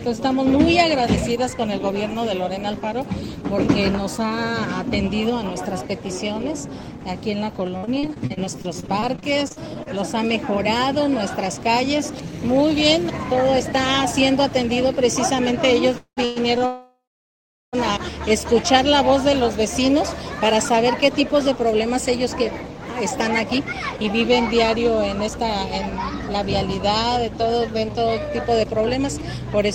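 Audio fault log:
7.77–9.99 s: repeated packet loss (robotic sound). Nineteen short holes, the longest 53 ms, are each bridged by extending the preceding sound. About 0.45 s is concealed, roughly a fifth of the span, and 0.38 s of real audio is lost, giving a choppy texture.
15.98–16.62 s: repeated stalls (stutter). The playback buffer ran dry three times as packets arrived late, and each wait was filled by holding the last sound, the longest for 192 ms. The stalls add 0.32 s, half the span, and nothing is lost, so the audio drags and stutters.
16.66–17.75 s: call audio freeze. The sound stops for about 1.07 s. The held sound fades, and 0.74 s of that is silence before playback resumes where it stopped, with nothing lost. The likely cause is packets held up in transit emptying the jitter buffer, adding 1.07 s of delay.
23.11–24.15 s and 29.18–29.68 s: jitter buffer speed-up. With more audio buffered than it aims for, the receiver trims pitch-period-sized pieces to shrink its delay. 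Playback runs at 106% and then 107%, with around 70 ms and 40 ms removed. Pitch stays the same, but the pacing sounds hurried.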